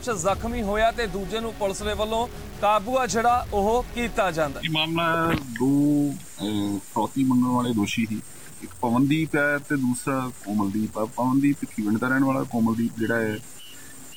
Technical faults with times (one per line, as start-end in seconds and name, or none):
0.00-14.16 low bit depth without dither